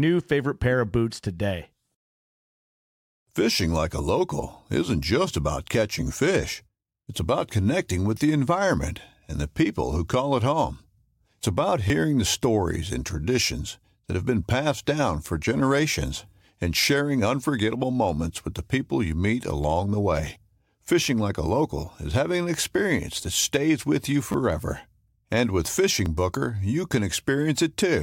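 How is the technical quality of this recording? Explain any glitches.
Four brief glitches mar the speech. Repeated buffer at 11.88–11.90, 21.04, 24.32–24.34 and 26.06 s: delayed audio made the device replay a tiny chunk, fitting a 10 ms buffer, heard as a click or buzz.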